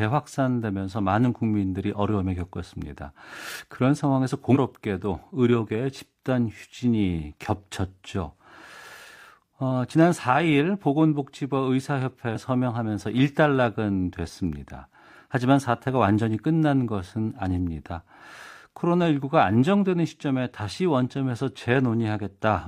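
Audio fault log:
4.51–4.57 s and 12.31–12.36 s: damaged data in a compressed stream. Two short bursts of about 66 ms and 50 ms break into the speech as brief glitches, each a chirp, squawk, click or short hole. At each point the bytes of the encoded stream are corrupted, so the decoder cannot read those frames properly. It renders garbage or nothing, loses frame sync, and resumes only when it finds the next valid frame header. The result is an abrupt, non-acoustic glitch rather than a gradual degradation.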